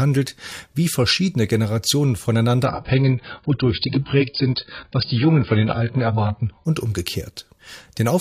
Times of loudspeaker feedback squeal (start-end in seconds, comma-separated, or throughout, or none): none